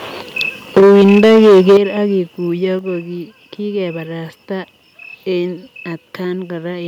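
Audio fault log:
0.76–1.77 s, microphone overload: The input level was likely set too high, driving peaks roughly 10 dB past the converter's ceiling, so close to a third of the samples in this stretch are flattened at the converter's limit. With their tops sheared off, the waveforms gain a dense spread of added harmonics, heard as a harsh, crackling edge on the loudest syllables that stays for the whole second until the level comes down.
0.78 s, 1.78 s and 2.79 s, microphone volume stepped down: Software gain control reacting to the overload likely lowered the device's input volume in single jumps, by about 2 dB, then about 9 dB, then about 4 dB. Each cut drops voice and room noise together in an instant rather than easing down, so the level steps audibly. The largest drop, at 1.78 s, lands right as the distortion stops, leaving the following sound noticeably quieter.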